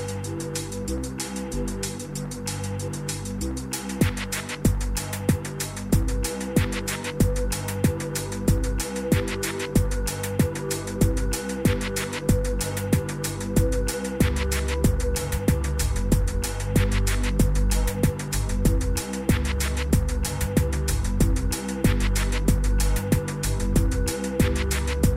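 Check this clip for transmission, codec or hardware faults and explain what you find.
Two short jumps in the audio, at 4.0 s and 10.96 s, each a point where the sound lurches forward with no gap of silence. The first skips roughly 40 ms, the second about 20 ms. The likely cause is a dropped buffer (overrun): the recording software fell behind, the hardware overwrote a block of samples before it was read, and the audio on either side was butted together.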